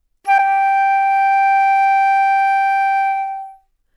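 A short glitch cuts into this everyday-sound recording from 0.38 to 0.40 s, reaching around -10 dBFS. This is a corrupt frame decoded: flipped bits in compressed data, which fits a few damaged frames, were decoded anyway, putting energy at the wrong frequencies.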